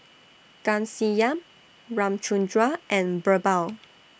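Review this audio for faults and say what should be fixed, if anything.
Nothing needs fixing, because the speech signal holds steady throughout with no audible technical fault at any point.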